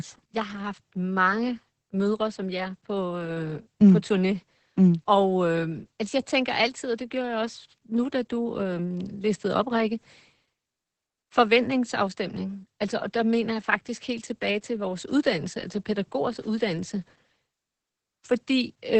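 From start to finish the speech sounds muffled and hoarse, with a slightly robotic edge, and nothing is heard above about 8.5 kHz. This is heavy Opus voice compression. The codec has run in its SILK linear-prediction mode at wideband, cutting off everything above 8 kHz and coding the excitation signal coarsely. That coarse excitation produces the rasp and the synthetic quality, which fit a very low bitrate of around 10 kbps.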